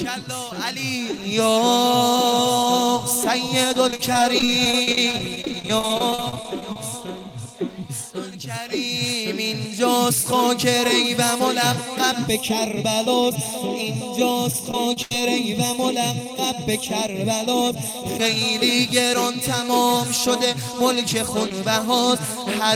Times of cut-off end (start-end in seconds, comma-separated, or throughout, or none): none